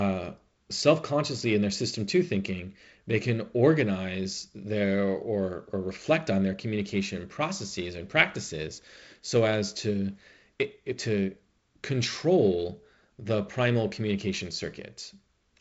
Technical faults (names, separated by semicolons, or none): none